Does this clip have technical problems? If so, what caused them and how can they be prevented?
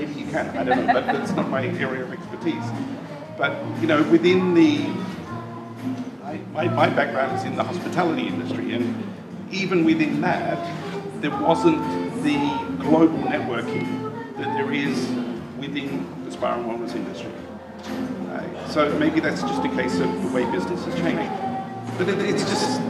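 Yes. A doubled audio track starts abruptly at 20.98 s and runs to the end: a second full-band copy, about 5 dB quieter, trails roughly 100 ms behind with no decay or room colour, likely from the signal being captured again through a slower path. Preventing it means monitoring or routing the source through only one path so it is never recorded twice.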